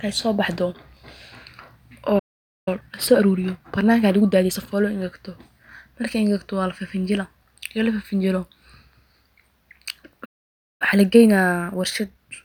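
A speech recording that twice cuts out and then rushes to catch up. The first playback stall runs from 2.19 to 2.68 s, a gap of about 0.48 s, and the second from 10.25 to 10.82 s, about 0.55 s. Both times the sound halts mid-flow and the output is dead silent, most likely because the player's buffer ran dry or its thread was held up. On a waveform each stall is a flat line cutting straight through the envelope. On a spectrogram it is a clean vertical blank band across all frequencies. Each stall is followed by time-compressed catch-up, where the player trims its backlog by dropping small slices and cross-fading the joins. From 2.68 to 4.58 s the speech plays at 1.25 times normal speed, and from 10.82 s to the end at 1.1 times. The pitch stays where it was, but the delivery sounds hurried. On a spectrogram the harmonics keep their spacing while syllables and pauses are visibly squeezed together in time. 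The waveform shows denser, shorter envelopes, with small seams where pieces were spliced.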